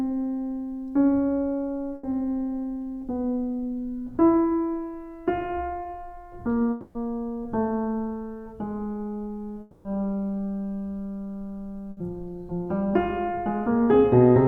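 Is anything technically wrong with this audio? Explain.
Yes. The music is interrupted by several gaps that were patched over by a receiver.

Burst of packet loss, at 1.95 to 2.13 s and again at 11.91 to 11.99 s: the music briefly freezes into a held, fading tone, then jumps ahead. A run of packets went missing, about 80 ms at the first point and 60 ms at the second. The decoder stretched the last sound across each hole while turning it down, and then picked up later in the music, so the lost portion is skipped.

Short concealed packet loss, at 5.83 to 5.87 s: a quick smear or wobble passes through the music. About 20 ms never arrived in time. The decoder continued the preceding sound to cover it and blended back into the real audio.

Long network dropout, at 6.71 to 6.97 s and at 9.61 to 9.87 s: each time, the music turns into a sustained, decaying imitation of itself for roughly a quarter of a second, then returns further along. 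No silence opens up. The concealment fills the whole 240 ms before the music resumes. A likely cause is a stall in the network connection, with the receiver synthesising sound until real data arrived again.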